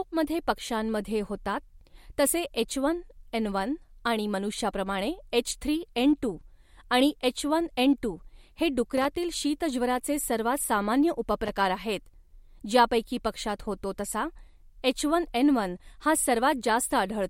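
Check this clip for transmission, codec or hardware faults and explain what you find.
Two short bursts of loose connector crackle interrupt the speech, from 8.97 to 9.07 s and from 11.46 to 11.51 s. A worn or dirty contact is making and breaking, chopping the signal into irregular scratchy crackle. Unlike a digital dropout or single click, each burst is ragged and uneven rather than one clean gap or pop.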